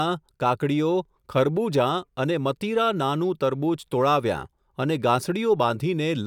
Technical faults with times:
none

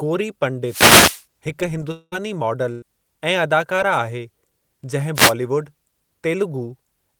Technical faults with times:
0.64-1.25 wireless microphone noise hit
1.91-2.14 long network dropout
2.72-2.84 burst of packet loss
3.76-3.79 short concealed packet loss
5.14-5.34 wireless microphone noise hit

